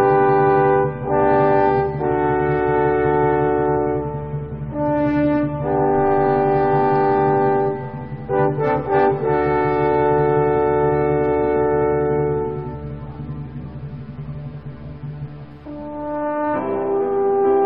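No technical faults can be heard anywhere in this clip.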